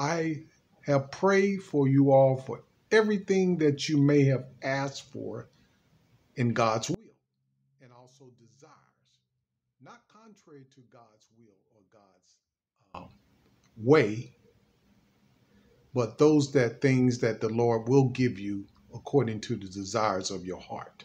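From 6.94 to 12.94 s the level falls by about 29 dB and only a faint residue remains, the likely result of one channel inverted, so the content shared by both channels cancels when they are summed to mono. Unlike a dropout, the sound never fully stops.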